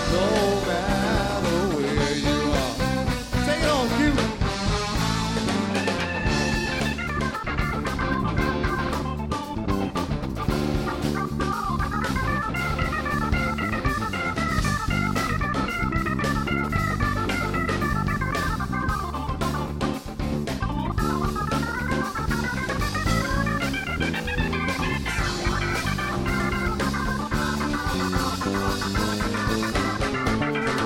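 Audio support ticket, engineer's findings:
No faults turned up on a listen through this one, so there's nothing to chase here and the ticket can be closed out.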